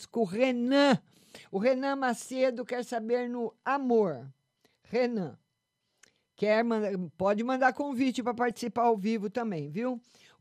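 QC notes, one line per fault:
8.43–8.58 s, DAB burbling: after "pode mandar convite para" and before "ao vivo", brief blips of noise in single sub-bands sit over the speech. Bit errors slipping past error correction corrupt MP2 sub-band samples and scale factors, which fits several consecutive frames with an error rate of about 0.15%.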